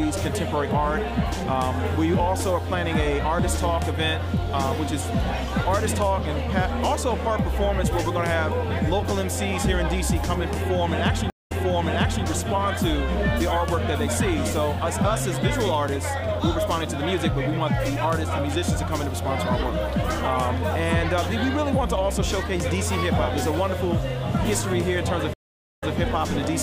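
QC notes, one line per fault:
11.30–12.25 s, stream reconnect: the connection dropped and a fresh decoder restarted mid-stream, leaving a 191 ms gap, then playback resumes 0.76 s earlier, repeating that stretch.
25.34–25.96 s, stream reconnect: a second dropout and decoder restart leaves a 471 ms silence, and the audio picks up 157 ms earlier, briefly repeating material.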